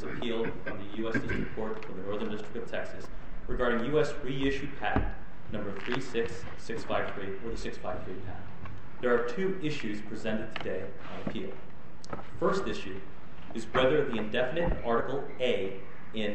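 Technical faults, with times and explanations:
3.06 s, 9.03 s and 15.01 s: audio missing between chunks. About every six seconds a slice of a few tens of milliseconds drops out, and the sound on either side is joined with no silence, so it jumps forward abruptly. The regular spacing points to a likely cause of the audio being handled in 6-second chunks and losing material at each handover. On a waveform the cycle shape breaks off and resumes out of step; a spectrogram shows a thin vertical seam where the texture jumps.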